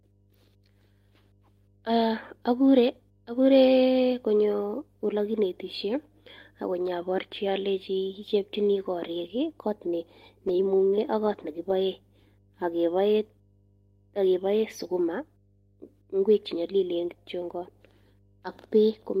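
Mains hum runs throughout: a steady 50 Hz tone, sitting roughly 35 dB below the speech, where a ground loop or nearby transformer leaks the power line into the signal. A lost packet rebuilt from error correction follows at 11.25 to 11.39 s, just after "neimung'e ak". About 80 ms, consistent with four packets, plays from low-bitrate backup copies, so there is no gap but the sound turns rougher and noisier. A second, 20 ms repair at 13.19 s sounds the same.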